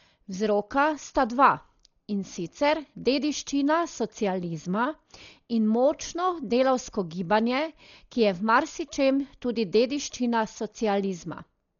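Throughout the clip, the speech is heavily damaged by lossy coding, likely Dolby Digital compression. Nothing is heard above 6.9 kHz, so the sound is dull and muffled. The encoder has too few bits for the signal. It narrows the band and gives many frequency lines no real detail. The decoder fills those gaps with noise. This leaves a rough, fluttering texture around tonal parts. The damage fits a very low bitrate, around 40 kbps.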